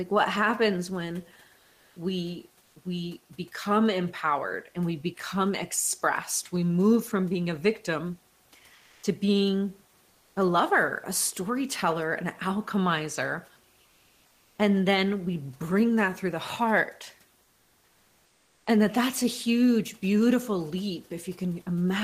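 Comfort noise in place of the background appears at 1.59–1.95 s, 8.75–9.03 s, 13.85–14.57 s and 17.43–18.65 s. In each pause the real room noise gives way to a steady, featureless hiss. The likely cause is discontinuous transmission such as Opus DTX, where the sender goes quiet once no speech is detected and the receiver synthesises filler noise. The filler sits about 1 dB above, then about 2, 2 and 4 dB below, the true background.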